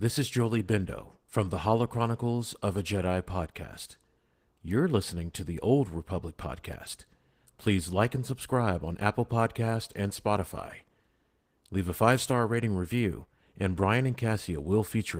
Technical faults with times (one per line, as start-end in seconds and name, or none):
0.00-15.19 Opus voice compression